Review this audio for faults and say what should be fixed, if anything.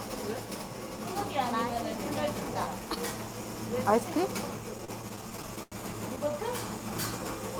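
Between 4.71 and 5.74 s there's a repeated-stalls stutter. Packets were arriving late or slower than playback, so the jitter buffer kept running dry. Across 13 separate gaps the receiver held on to the last bit of sound, fading it through the longer waits, which add up to 224 ms of filler, about a fifth of that stretch, with the longest hold at 89 ms. Nothing's actually lost, but the sound drags and hiccups. A deeper or adaptive jitter buffer would ride out that slow delivery.

Then there's a short stall from a late packet at 6.32 to 6.35 s. One packet showed up roughly 17 ms behind schedule, the buffer emptied, and the receiver stretched the preceding sound by 17 ms before picking up exactly where it left off. You get a brief held moment with a faint buzz or dip, and no missing audio. A bit more buffer headroom would absorb a delay jump that small.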